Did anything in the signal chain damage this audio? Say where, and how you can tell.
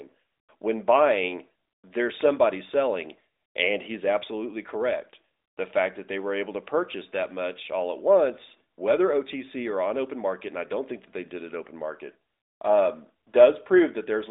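No, nothing in the chain damaged this speech, and there is no stage where a fault shows itself.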